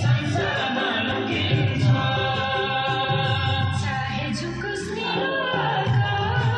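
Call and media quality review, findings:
Brief glitches at 1.10–1.12 s and 3.03–3.05 s. Component: compressed stream decode. Damaged data in the compressed stream; corrupted frames are misread, the decoder loses sync and resyncs at the next valid frame header.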